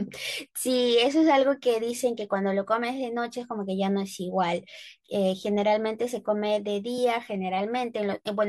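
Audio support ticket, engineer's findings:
Listened through the full speech recording and nothing stood out; no findings to log.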